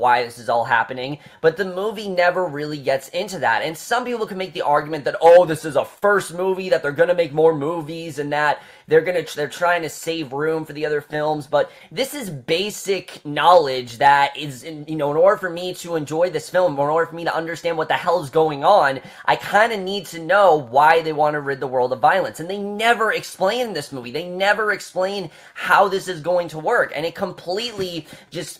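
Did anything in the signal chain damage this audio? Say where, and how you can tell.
Yes, three related problems, all at the transport end.

Clock drift between sender and receiver sits in the network or buffer stage. The sender's clock seems to run about 3 percent slow. The receiver's jitter buffer keeps draining, so it has to stretch the audio to cover the shortfall. That's why the timing feels slightly loose from start to finish.

Repeated timing corrections are the buffer's response. From 0.10 s to 28.30 s you get small, unevenly spaced hiccups, all repeats and never cuts. Together they add roughly 0.7 s and leave the pace at about 98 percent, with a faintly unsteady tempo.

Scattered short gaps come from packets lost or late on the network, with each hole patched by extending the last sound. There are about seven between 4.07 and 8.07 s, the longest around 40 ms. Shorter clusters of about 10 ms ticks fall at 10.04–13.26 s, 17.02–19.61 s and 22.31–24.73 s.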